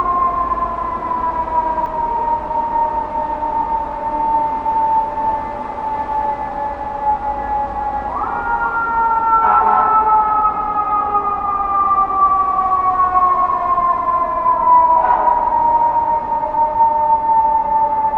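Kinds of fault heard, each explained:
Doubled audio track: it's already going when the clip starts and runs to 1.86 s, with a full-band copy of the sound trailing about a tenth of a second behind, a bit quieter, no decay; likely a slower second capture path. Then it stops abruptly.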